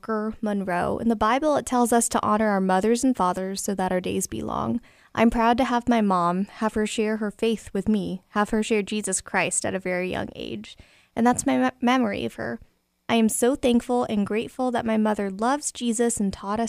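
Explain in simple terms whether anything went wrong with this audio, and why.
Nothing went wrong with this recording. The speech comes through steadily from beginning to end, with no point where the sound stumbles or breaks down.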